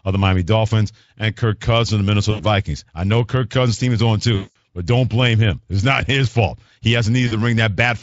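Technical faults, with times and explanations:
2.31–2.45 s, 4.35–4.56 s and 7.27–7.34 s, VoIP packet loss concealed by the speech codec: packets went missing, about 80 ms, 200 ms and 40 ms of them. The decoder filled each gap by repeating its last pitch and vocal-tract shape at falling gain, so the speech smears into a buzzy tone or coloured noise that fades, longest at 4.35 s. Because each rebuilt frame feeds the next, the speech stays thin and rough briefly after each gap.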